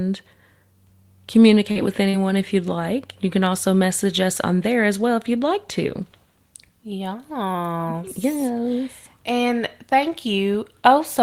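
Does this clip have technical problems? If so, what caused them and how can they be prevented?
Yes. The speech has two instances of short concealed packet loss, at 1.71 to 1.77 s and again at 2.09 to 2.15 s, just before "if you'd like". In each case about 40 ms of audio failed to reach the decoder in time, and the receiver covered the gap by extending the preceding sound, pitched or noise-like as appropriate, before crossfading back. The result is a brief smeared wobble where the real signal should be. A larger jitter buffer and forward error correction on the network path would prevent these gaps.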